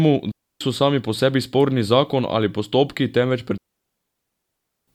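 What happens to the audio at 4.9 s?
At 4.9 s the digital wireless dropout is just ending. From 3.58 s, after "zakon ali postopki temveč", the receiver muted for 1.3 s when the link lost too much data. The result is a clean near-silent hole with no noise burst.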